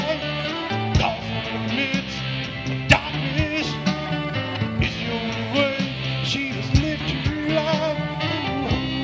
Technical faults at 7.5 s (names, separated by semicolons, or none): none